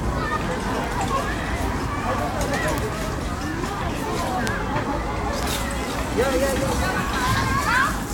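A recording of sounds with bit error spikes, where single bits flipped in memory or on a digital link. Each error pushes one sample, or a few in a row, off by a power of two before the signal snaps back. What you hear is an isolated broadband tick unrelated to the surrounding audio, at 0.84, 2.78, 4.47 and 5.43 s. The ticks peak at about −15, −3, −3 and −9 dBFS, so the middle two are the loudest.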